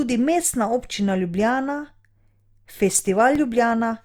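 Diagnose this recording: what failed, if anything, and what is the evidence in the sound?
The failure is at the storage and playback stage: CD scratch ticks. Seven regular ticks run from 2.45 to 3.54 s, about six per second, the longest lasting about 2 ms. On a waveform they look like brief flattened or stepped spots in the speech. A spectrogram shows thin vertical broadband lines at even spacing. A blemish on the disc destroys more data than error correction can rebuild once per revolution, and the player interpolates or mutes those samples.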